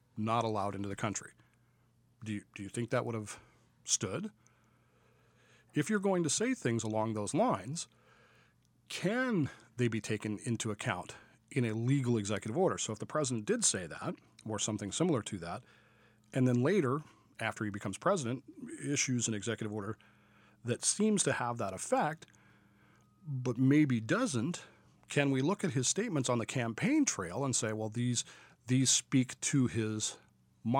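Nothing in this speech recording stands out as a technical fault at any point, so there's nothing to flag here.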